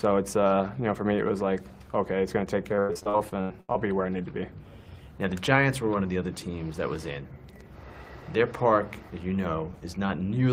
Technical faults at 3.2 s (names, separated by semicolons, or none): repeated packet loss (robotic sound)